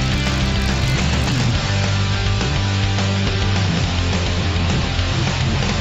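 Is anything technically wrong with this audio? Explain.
Yes. From 0.0 to 1.5 s, the resampler restarted on every block. The 16 kHz to 48 kHz conversion treated each 20 ms block alone, ignoring neighbouring samples. So every block edge carries a small error. Together these form a 50 Hz buzz.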